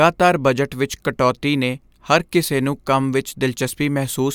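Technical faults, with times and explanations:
No technical faults can be heard in this speech recording. There is nothing to mark with a time or explain.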